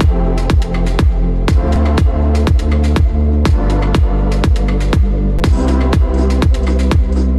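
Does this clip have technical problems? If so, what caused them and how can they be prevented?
Yes. A repeated buffer occurs at 1.76 s and again at 5.39 s. New audio did not reach the output in time, so the device played its last block again. The repeating piece lasts about 5.8 ms, which fits a 256-sample buffer. At 1.76 s it sounds one extra time, and at 5.39 s three extra times. Each repeat leaves a hard join, so with a buffer this small each event is heard as a click or brief buzz. No audio is lost. Giving the audio thread more headroom, through a larger buffer or lower system load, prevents these underruns.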